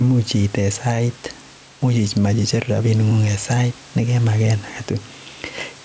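Gain pumping runs through the whole recording. The gain swings by roughly 5 dB, which gives the speech a squashed quality. This is likely a microphone gain set too high with a fast limiter clamping every peak. The room noise sits about 31 dB below the speech. The call processing leaves nothing above 8 kHz.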